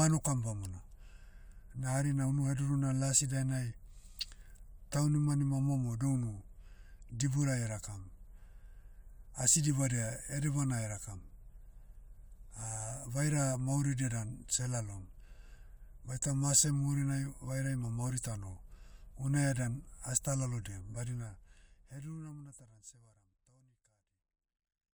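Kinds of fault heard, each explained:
No technical faults can be heard in this speech clip. The level eases down in a smooth editorial fade-out from around 21 s to 24.9 s, with no click or hard edge.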